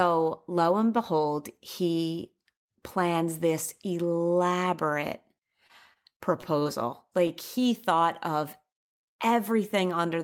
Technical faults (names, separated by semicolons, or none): repeated packet loss (robotic sound); short stall from a late packet